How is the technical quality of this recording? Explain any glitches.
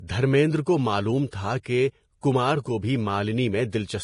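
The recording is heavily degraded by lossy coding throughout, with three brief smeared attacks.

Across the whole speech clip the sound is hissy and grainy, with nothing above 10.5 kHz. This is likely heavy Vorbis compression at a low bitrate, around 31 kbps. A spectrogram shows a hard ceiling and speckled, noisy treble.

Pre-echo occurs at 1.30–1.33 s, 1.63–1.66 s and 2.21–2.23 s. Block-spread quantisation noise leaks 22–26 ms ahead of attacks, heard as short hiss. On the waveform it appears as low fuzz before each onset.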